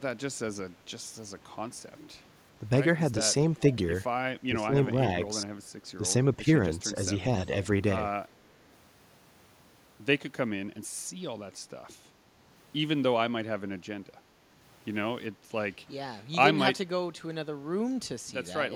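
From 3.57 to 3.75 s a faint copy of the speech returns about 0.4 s late, far below the talker, likely an echo leak past the far end's canceller. Unlike reverb, it is a distinct delayed repeat. At 4.48 to 4.89 s, and briefly at 5.97 to 6.03 s, the speech itself dips, deeply at first and only slightly later, which is likely speech suppressed in double talk as the canceller ducks its own talker along with the echo. At 15.35 to 15.51 s the room sound drops by about 7 dB for a moment, and then comes back. This is background gated by the echo canceller: the ambience dips.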